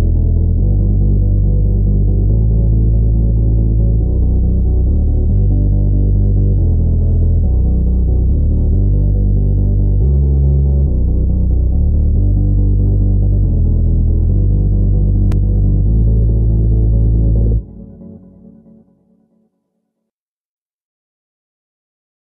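At 15.32 s there is a CD skip. The laser jumped to another turn of the disc's spiral, likely after a knock or a flaw. The player mutes for only a few milliseconds, giving a tick. Then the sound resumes from a different place.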